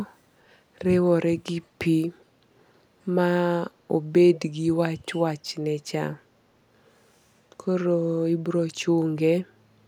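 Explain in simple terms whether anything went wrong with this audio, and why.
At 2.19 to 2.25 s, a very faint, brief copy of the speech turns up, trailing the original by about 0.39 s. This is an echo leak, likely from a caller using a loudspeaker whose echo canceller let a scrap of that sound slip back into the call.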